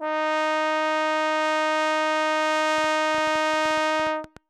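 A train of clicks runs from 2.78 s to 4.38 s, about fifteen short pulses at roughly 8.2 per second, spaced unevenly rather than on a steady beat. Each click has much the same sharp shape and peaks about as loud as the music itself, so it pokes through as a ticking, popping layer on top. The repeated identical pulses point to likely electrical interference or a faulty connection or power supply injecting spikes into the signal path.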